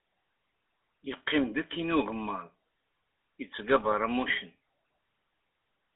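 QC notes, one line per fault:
throughout: GSM full-rate codec. A gravelly, buzzy roughness in a 250 Hz to 3.5 kHz band marks pulse-excited vocal-tract coding, not the smoother grain of wideband codecs.
3.80 to 3.87 s: GSM bit errors. A brief squawking, gargled burst of about 70 ms, consistent with corrupted decoder parameters over a few frames, not a silent dropout.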